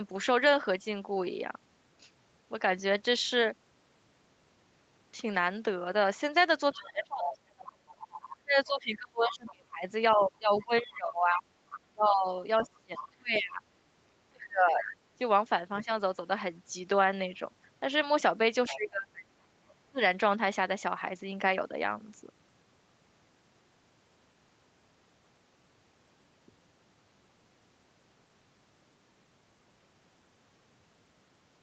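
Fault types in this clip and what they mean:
Other side's voice leaking through: A faint second voice runs under the talker from 6.7 to 10.7 s and 11.7 to 13.4 s, with short scraps near 14.9 s and 18.7 to 19.2 s. It sits roughly 15 to 20 dB down and is likely loudspeaker echo the canceller missed. A spectrogram shows a weak, separate harmonic pattern overlapping the main one.
Speech suppressed in double talk: From 6.7 to 14.9 s, with a brief dip near 15.9 s and again from 18.7 to 20.0 s, the talker's level sinks by up to around 30 dB while both sides speak. This is likely the canceller turning everything down. The waveform shows sudden hollows, and the spectrogram thins out.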